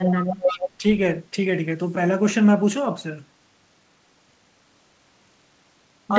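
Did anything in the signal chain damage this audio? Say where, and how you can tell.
Yes. From 0.05 to 0.7 s, an echo leak, likely in call processing, repeats the speech 344 ms late and only a few dB down. A spectrogram shows the harmonic pattern duplicated and shifted later in time.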